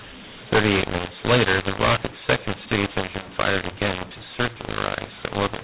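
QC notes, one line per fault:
Throughout: mu-law and A-law mixed up. Harsh, distorted speech with noisy pauses, because A-law telephone samples are decoded as mu-law, scrambling levels.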